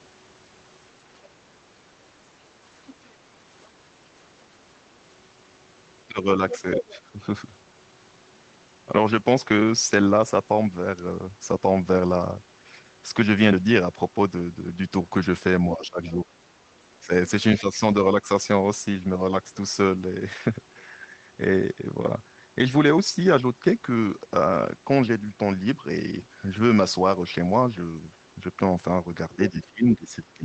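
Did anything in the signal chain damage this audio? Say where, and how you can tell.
Yes, in call processing. Speech suppressed in double talk shows at 6.07–7.22 s, 15.76–16.26 s, 17.06–18.29 s, and from 29.36 s to the end. The level dips by roughly 10 to 20 dB. The likely cause is an echo canceller that confused the talker with loudspeaker echo and turned both down.

The other side's voice leaking through is heard at 6.5–6.95 s. It is a second voice, roughly 10 dB below the speech, inside the first dip. It is likely residual loudspeaker echo that the canceller failed to subtract from the microphone signal.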